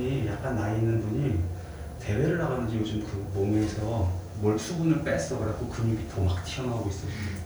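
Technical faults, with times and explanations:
No technical faults are heard.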